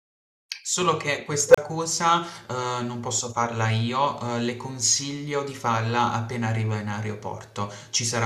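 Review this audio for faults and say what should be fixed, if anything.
An unstable filter fault runs from 1.48 to 1.58 s: a tone of around 500 Hz swells over about 62 ms, clips, then drops to roughly 30 ms of silence as the recursive filter overflows and resets. Unlike acoustic feedback, it peaks within milliseconds and ends in abrupt silence. Check filter coefficients for stability and clamp or reset the filter state before it can overflow.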